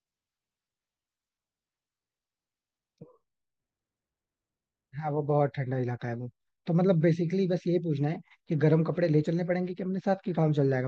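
No technical faults are audible.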